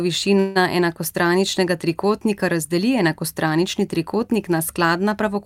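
A speech clip with one call audio freeze, from about 0.39 to 0.57 s, just before "enakostraničnega trikotnika razdeli". For roughly 160 ms the last bit of sound gets stretched out into a fading buzz instead of moving on, then the speech picks up right where it left off. Nothing seems to be missing, but everything after it lands about 160 ms late. The likely cause is packets held up in transit, which let the jitter buffer run dry.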